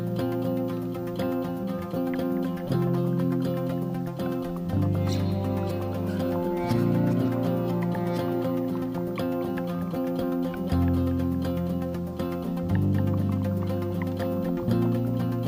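Nothing in the audio stood out as a technical problem on listening.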